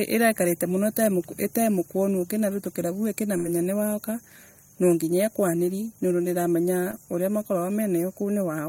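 Speech with two dropouts. From 3.37 to 3.47 s the sound smears into a held, fading tail before resuming: a burst of packet loss, with about 75 ms synthesised over roughly 80 ms of missing audio. At 6.91 to 6.94 s a brief wobble marks short concealed packet loss, where 20 ms never arrived and 15 ms was filled from the preceding sound.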